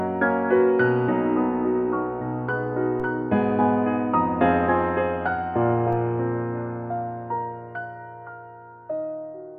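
At 3.00 s and again at 5.93 s, the zero line of the waveform jumps abruptly, a DC step of about -32 dBFS each time, as if an offset were suddenly switched into the signal path. Each step then bleeds away through what behaves like a 5 Hz high-pass, so the offset decays rather than holding. Each jump is heard as a short, low thump under the music, which carries on unchanged through both events.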